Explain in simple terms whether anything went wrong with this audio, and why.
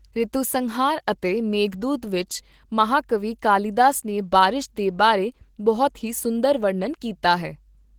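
The speech sounds rough and slightly robotic from start to finish, with a hoarse, grainy edge that is easy to notice. The cause is Opus voice compression, squeezed into a small amount of data. The coder predicts the voice in small slices and rebuilds the lower part from a simplified model, adding a coarser layer for the upper part. With so little data to work with, the fine detail of the voice is approximated rather than kept.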